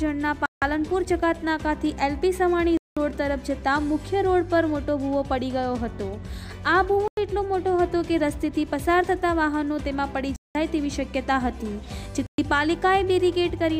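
Packets were likely held up by interference, a Bluetooth stall emptying the headphones' buffer; the sound drops to silence for 0.1 to 0.2 s at 0.46, 2.77, 7.08, 10.36 and 12.26 s, then resumes.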